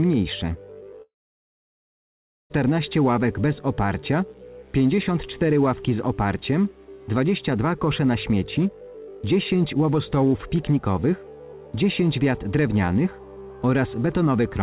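Around 1.02 s the audio cuts out until 2.52 s, likely a long network dropout: about 1.5 s never arrives, a brief fading tail, then roughly 1.4 s of silence, all heard through a narrowband G.711 call path with nothing above 4 kHz.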